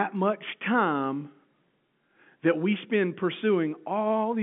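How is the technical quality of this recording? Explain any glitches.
No technical faults are audible.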